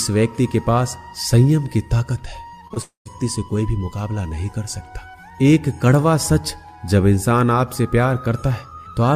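At 2.67 s and again at 2.74 s the sound smears briefly, each time for roughly 40 ms, with a wobble. These are short concealed packet losses. About 20 ms of audio failed to reach the decoder in time on each occasion, and the receiver bridged each hole by extending the preceding sound for 20 to 24 ms before blending back into the real signal.

From 2.82 s the sound turns into a fading buzz-like continuation, then drops to silence for about 140 ms before the audio picks up again at 3.07 s, with the content that belonged in that gap simply absent. This is likely a long network dropout. Around 240 ms of audio never arrived, so the receiver stretched the last sound until that became implausible and then went quiet rather than invent more.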